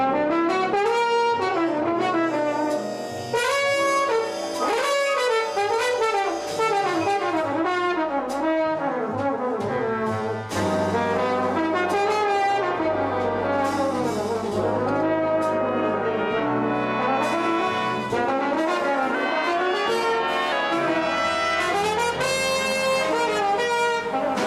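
Playback at the wrong sample rate, consistent with 44.1 kHz audio output at 48 kHz, makes the sound from 19.15 to 20.52 s run 1.09 times fast and 1.47 semitones sharp.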